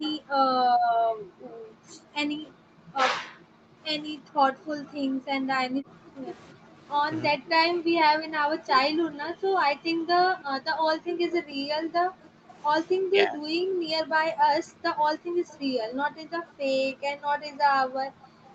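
At 0.0 to 0.06 s the speech dips by roughly 25 dB, and overlapping it from 0.04 to 0.13 s a faint delayed copy of the sound appears, about 20 dB below the speech and 326 ms behind it. The dip is likely speech suppressed in double talk, with the canceller pulling down the near talker while the far side was active. The trailing copy is likely an echo leak, where loudspeaker pickup on one side got past its echo canceller and came back.

From 0.34 s to the end the background is gated by the echo canceller. The room sound is repeatedly pushed down, by as much as 40 dB, for about 10 s in total, so the noise floor pumps in and out as the canceller clamps the microphone and releases it.

Echo leak returns at 4.89 to 7.78 s (about 30 dB down), 11.32 to 12.3 s (about 25 dB down) and 15.48 to 18.49 s (about 25 dB down). Each time it is a 326 ms delayed copy, heard as a trailing repeat under the speech.

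Double-talk suppression recurs at 7.28 to 7.42 s, a dip of roughly 15 dB, and at 13.08 to 13.57 s, where the speech drops by roughly 40 dB and nearly cuts out.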